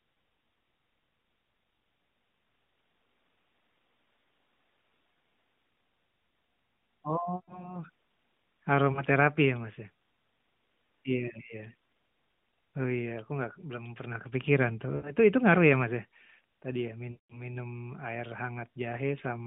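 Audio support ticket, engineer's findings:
Lost AMR speech frames at 5.14–5.16, 7.36–7.78, 8.92–9.02, 14.96–15.14 and 17.12–17.45 s. Decoder concealment: sound smears, then decays toward silence, then recovers rough. Waveform shows envelope sagging in the gaps; spectrogram shows frozen, fading harmonics within the 150 Hz–3.7 kHz band.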